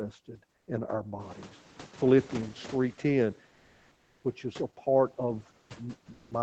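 At 0.55 to 0.67 s, 3.51 to 4.23 s (ending just before "which is a part"), 5.59 to 5.69 s (just after "which is a part") and 6.13 to 6.31 s, the real background gives way to steady, featureless comfort noise, likely from Opus DTX, shifting level by up to about 4 dB. From 1.19 to 3.41 s, just after "in our", the noise suppressor is catching up: the room noise jumps about 20 dB near 1 s, then sinks about 9 dB over 2.2 s.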